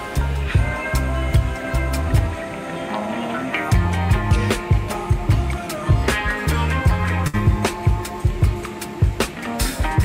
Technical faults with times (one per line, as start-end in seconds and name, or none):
7.27-7.36 burst of packet loss